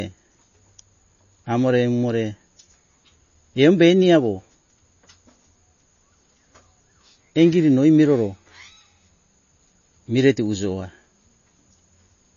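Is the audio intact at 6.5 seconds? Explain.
No. At 6.5 seconds, as throughout the speech, the sound carries damage that likely comes from MP3 compression at a low bitrate around 32 kbps. Starved of bits, the encoder removes everything above 6.9 kHz and drops weak frequency lines frame to frame, leaving a dull, plainly watery, swirly texture.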